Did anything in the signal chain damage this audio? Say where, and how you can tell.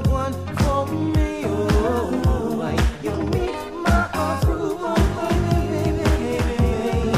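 Yes: a doubled audio track begins abruptly at 4.97 s and runs to the end of the clip. A second, full-band copy trails the original by roughly 300 ms at around 5 dB lower, with no decay or room colour, so it reads as a clean repeat rather than an echo. The likely cause is the same signal being captured again through a slower path, or an edit leaving two copies out of alignment.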